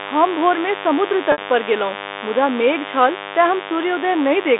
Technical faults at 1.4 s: mains buzz; packet loss with pitch repetition

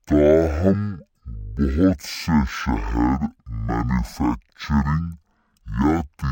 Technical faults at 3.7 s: stereo read as mono

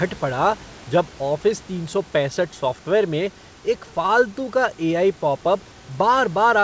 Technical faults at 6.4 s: none

